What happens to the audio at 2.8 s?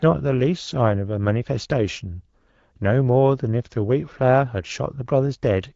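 Nothing goes wrong at 2.8 s: the speech there comes through intact, carried cleanly by the AMR wideband (HD Voice) codec at 12.65 kbit/s.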